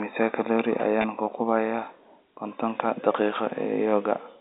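At 1.02 to 1.04 s, packet loss with pitch repetition: a 20 ms gap, consistent with one lost packet, bridged by repeating the last pitch period, heard as a brief buzzy hold over the G.711 telephone band.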